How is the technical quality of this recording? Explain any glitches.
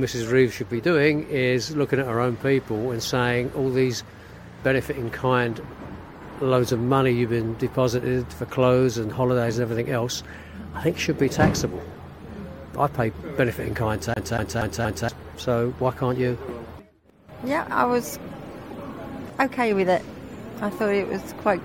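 There's one glitch: a CD stuck on one turn from 14.14 to 15.09 s, where a scratch kicks the laser back, so a 0.24 s snippet repeats four times with tiny mutes between.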